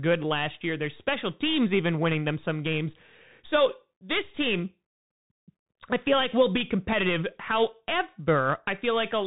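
From start to finish the speech sounds boxed-in and dull, with nothing above about 3.8 kHz, a gritty, granular hiss riding underneath, and scratchy s sounds that break up on loud, bright moments. This is the Bluetooth CVSD headset codec at work, consistent with a 64 kbps link: each sample is coded as a single up-or-down bit with an adapting step, so fast high-frequency swings outrun the step and distort.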